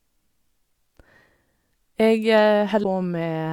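At 2.80 to 2.84 s, a stretch of the compressed speech stream carries damaged data: the bytes there are corrupted, so the decoder cannot read those frames correctly, drops out of step with the frame structure and has to hunt for the next valid header before it can resume. For roughly 40 ms the speech breaks into a short glitch, heard as a chirp, squawk, click or short hole that doesn't belong to the signal, before decoding resumes.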